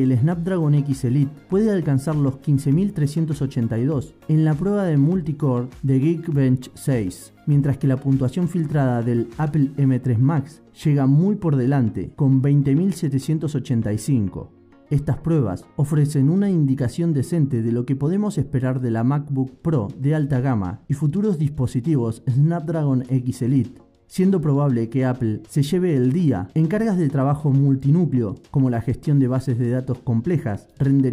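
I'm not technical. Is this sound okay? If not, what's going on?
Yes, this sound is okay, and there's nothing wrong going on in it.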